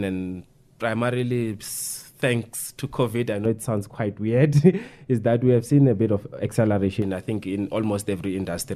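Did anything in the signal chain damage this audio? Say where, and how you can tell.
Yes. From 3.45 s to 7.02 s the speech passes through a de-emphasis stage applied wrongly, either to audio that was never pre-emphasised or a second time on top of a correct one. The filter tilts the response smoothly downward with frequency, leaving content at 10 kHz about 11 dB lower than at 1 kHz. That lost treble makes the speech in this span sound dull and muffled compared with the audio before and after it.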